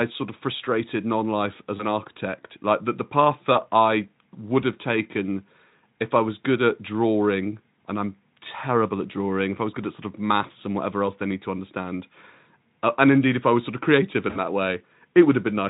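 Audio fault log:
1.78–1.85 s and 3.53–3.60 s, VoIP packet loss concealed by the speech codec: about 20 ms of sound is missing and replaced by an extrapolated buzzy tone or coloured noise that fades, with weak sound lingering afterward. On a spectrogram, the harmonics smear flat and dim, and the waveform envelope sags.
14.29–14.42 s, VoIP packet loss concealed by the speech codec: a longer gap, fitting roughly three lost 20 ms frames, is stretched into a fading buzzy tone or coloured noise. On a spectrogram, the repeated harmonic bands thin out, and the waveform amplitude decays before recovering.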